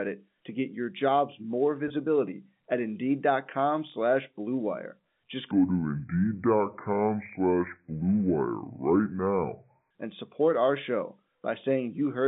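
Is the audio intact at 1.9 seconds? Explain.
No. At 1.9 seconds the audio carries two faults.

The first is packet loss with pitch repetition, from 1.88 to 1.90 s. One 20 ms packet went missing, and the receiver bridged the hole by replaying the last pitch period. Because the gap is short, it comes across as a briefly held, slightly buzzy sound rather than a dropout. On a waveform, the span shows identical repeated cycles with a slight fade. On a spectrogram, the harmonics run flat and frozen for that instant.

The second is a block size mismatch (truncated), which is present throughout the clip and so also at 1.9 s. One stage writes longer blocks than the next reads, and the tail of each block is discarded. This produces a steady 43.1 Hz buzz, which fits 1024-sample blocks, while the speed stays at 1.0×. A spectrogram shows evenly spaced vertical seams about 23 ms apart, and the waveform shows small discontinuities at each block boundary.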